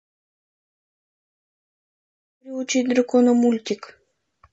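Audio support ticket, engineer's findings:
Rough, grainy speech right through the clip, noise filling in between the harmonics and a thin, synthetic-sounding top band. Likely low-delay AAC compression (AAC-ELD style): short frames around 10 ms can't separate the pitch harmonics well, and at this bit budget, consistent with roughly 32 kbps, the encoder smears noise between them and fakes the highs. Damage plainly audible. The smooth fade-in from about 2.5 s, complete by 2.92 s, is a deliberate edit.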